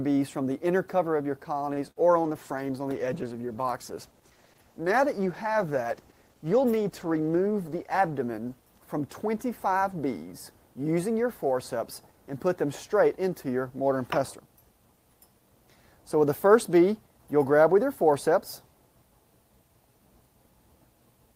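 At 1.73 to 1.79 s, a short stall from a late packet: the jitter buffer ran dry, and the last sound was held for about 35 ms, adding that much delay without losing anything. At 1.91 to 1.98 s, a burst of packet loss leaves the sound continued and fading for 48 ms before resuming with roughly 40 ms skipped. From 2.22 to 8.23 s, a call bitrate drop cuts the encoder from 32 to 13 kbps, making the sound coarser and duller until recovery. Within that span, from 7.53 to 7.94 s, a jitter buffer speed-up trims roughly 40 ms of pitch periods, so playback runs about 8% fast at unchanged pitch and sounds briefly hurried.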